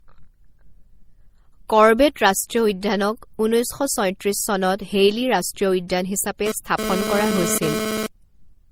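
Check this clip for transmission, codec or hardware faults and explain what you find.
Two faults are present in this speech clip: a layered codec texture throughout and a GSM phone buzz near the end.

Transcoding between lossy codecs, throughout: smeared, doubled compression artefacts with nothing above 20.3 kHz. The likely cause is re-encoding, consistent with MP3 at about 48 kbit/s followed by Opus at about 32 kbit/s.

GSM phone buzz, 6.46 to 8.07 s: a hard, raspy 217 Hz buzz with many harmonics, about 3 dB below the speech, that comes and goes. A nearby 2G phone's bursty data transmission is being rectified in the audio circuitry.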